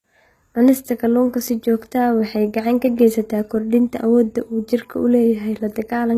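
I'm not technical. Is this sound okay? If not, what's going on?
No. Across the whole recording the speech has a gritty, metallic edge, and the s sounds come out lispy or smeared instead of crisp. This is likely HE-AAC compression, a format that keeps only the lower part of the sound and fakes the brightness above it by copying lower tones upward. The clip still sounds bright, with nothing above about 14.9 kHz. Ordinary heavy compression would sound dull or muffled. Here the treble sounds artificial.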